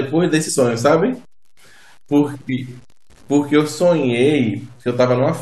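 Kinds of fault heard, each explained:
Low bit depth without dither: grainy distortion follows the speech, coarse on quiet passages, likely from truncating to 8 bits, leaving error around 35 dB below signal.
Compressed frames skipped: jumps at 0.48 and 2.49 s where the speech skips ahead, losing roughly two and three 21.3 ms frames respectively.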